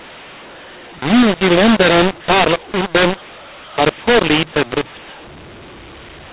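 Speech coded with G.711 A-law is being decoded as mu-law, a mu-law and A-law mix-up that runs from start to finish. Because the two logarithmic curves don't match, each 8-bit code maps to the wrong level, so some samples come out too loud and others too quiet, and the smallest values are pushed well above silence. The speech sounds harsh and gritty, while pauses fill with a noisy hiss. The narrow telephone band, capped near 4 kHz, is still audible.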